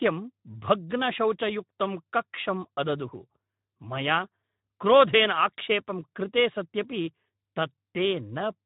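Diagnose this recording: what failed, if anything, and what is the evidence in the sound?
Speex codec damage runs throughout the speech, from start to end. At the codec stage, the CELP coder is starved of excitation bits, which fits roughly 11 kbps, leaving the speech noisy and hoarse, with nothing above 3.8 kHz.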